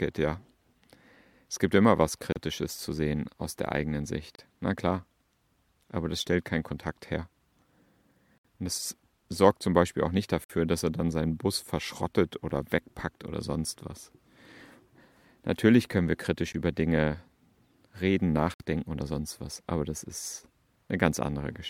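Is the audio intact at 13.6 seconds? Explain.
Yes, the speech at 13.6 seconds is intact, with no audible fault at that moment.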